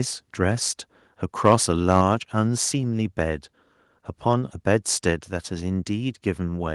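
From 1.46 to 1.55 s the loudest peak of the speech takes on a harsh, crackling edge, the signature of microphone overload. The input gain was likely set too high, so the waveform tops ran past the converter's ceiling by about 2 dB and were sheared flat. Only a few percent of samples in that span are cut, which keeps the crackle brief. The call path's band limit near 12 kHz dulls the top end throughout.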